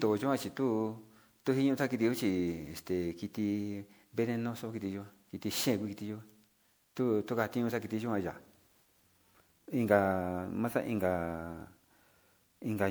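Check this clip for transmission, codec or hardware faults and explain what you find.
One codec fault runs through the whole clip. Generation loss, present throughout, likely comes from repeated lossy re-encoding, around seven passes, with the character pointing to MP3 near 128 kbit/s. Each pass quantises the speech again on a shifted frame grid, so the noise and gaps in the spectrum build up. The result sounds swirly, smeared and hollow, with softened consonant attacks. Nothing remains above 20.9 kHz.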